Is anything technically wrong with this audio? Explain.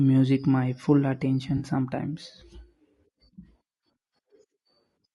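Yes, two faults are audible. Throughout, the speech was likely passed through low-delay AAC compression; short frames at a bitrate fitting about 32 kbps resolve harmonics poorly, leaving plainly audible grainy roughness and a synthetic-sounding top band. From 1.57 to 1.63 s, just after "my full", there is AAC frame loss with concealment: about 40 ms of data, fitting two frames, went missing and the decoder patched it from the previous spectrum, producing a brief smeared, noisy patch.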